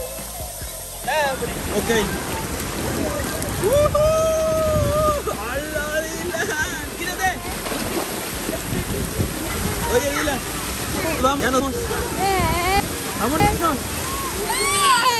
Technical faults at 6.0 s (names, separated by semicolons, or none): none